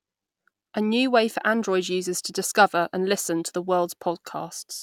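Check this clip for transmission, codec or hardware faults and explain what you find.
I found no transmission, codec or hardware faults in this clip.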